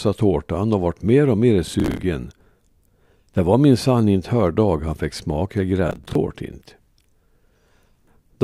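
At 1.67 to 2.03 s, and again at 5.89 to 6.15 s, the speech picks up processor overload crackle: the machine keeps missing buffer deadlines, replaying stale chunks of roughly 10 ms each, so hard-edged repeats pile into a gritty tearing that stops once the load eases.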